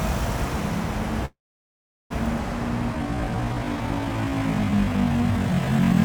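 A recording of everyday sounds, it carries a doubled audio track throughout: a full-band copy sits about 5 dB below the original and roughly a tenth of a second behind, most likely from a second, slower capture path or an edit holding two copies. Unlike an echo or reverb, the copy has no decay and no room colour. At 1.25 s a call audio freeze begins. The last sound is stretched into a fading fill that drops to silence for most of its 0.85 s, and at 2.12 s the audio resumes where it stopped. This was likely caused by delayed packets draining the jitter buffer. Unlike a dropout, nothing is lost; the sound is simply pushed later. From 2.90 s to the end is a time-stretched section, slowed to about 0.54 times speed and likely stretched in software to fit a length. It drags, but unlike slow playback, the pitch does not drop.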